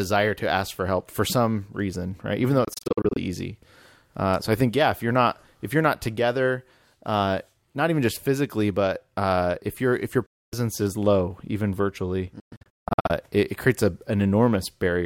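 Bluetooth dropouts hit at 2.64–3.17 s, 10.26–10.54 s (after "if your if your") and 12.40–13.11 s. The sound cuts to silent holes, scattered within the first and last, likely from packets reaching the headphones too late. Unlike a stall, playback resumes further on, skipping the lost audio.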